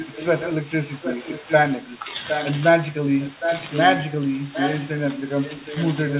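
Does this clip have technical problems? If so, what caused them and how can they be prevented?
Yes, there's an echo leak: a delayed copy of the speech trails about 0.76 s behind at 0–0.57, 0.97–1.56, 1.9–2.51, 3.24–4.0, 4.54–4.86 and 5.19–6.17 s, likely from a speakerphone whose echo canceller let it back through. A headset or better-tuned echo cancellation would stop it.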